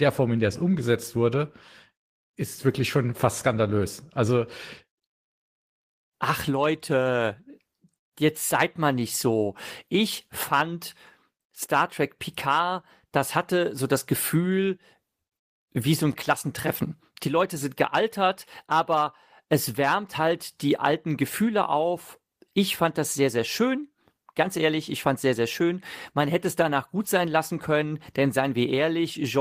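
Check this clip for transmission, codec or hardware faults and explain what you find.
Nothing here stands out as a transmission, codec or hardware problem; the speech just runs along without anything going wrong along the way.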